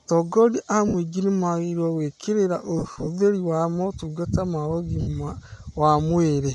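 The whole speech clip has a breathy, grainy top end, likely from Bluetooth LC3 compression. The codec strips much of the upper spectrum and patches it with noise, and the graininess fits roughly 48 kbps with 10 ms frames.

Then there are lost LE Audio frames. From 0.88 to 0.94 s, just before "nĩmagĩrĩirwo gwĩkĩrĩra", about 60 ms goes missing. The decoder repeats the last spectrum with scrambled signs, so you get a short noisy smear. From 2.79 to 3.08 s, between that phrase and "wa motungata ma", about 160 ms of dropouts are scattered across 280 ms, with the longest run around 50 ms, so it sputters. At 5.01 to 5.08 s, after "wa motungata ma", there's another smeared gap of about 60 ms.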